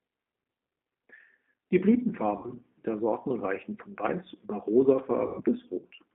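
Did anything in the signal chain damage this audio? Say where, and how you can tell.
Yes, at the codec stage. The whole clip is squeezed into a telephone band of roughly 250 Hz to 3.5 kHz and has the slightly rough, synthetic edge of G.729, which fits an 8 kbit/s stream rebuilt from a filter, pitch predictor and a few pulses per frame.

There's also VoIP packet loss concealed by the speech codec, at the network stage, from 2.37 to 2.53 s and from 5.26 to 5.42 s. The decoder stretches its last pitch and filter into a fading buzzy tone or coloured noise, which fits about 60 ms missing first, then 120 ms.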